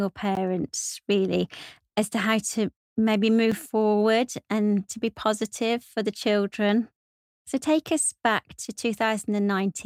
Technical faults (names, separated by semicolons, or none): block of digital silence